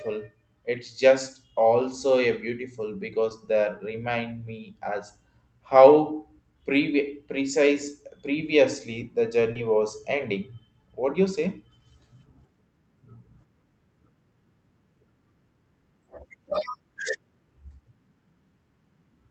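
At 3.29–3.31 s and 9.53–9.56 s, short concealed packet loss patches 10 and 20 ms gaps with extrapolated sound: brief smears, shown as blurred spectrogram slivers.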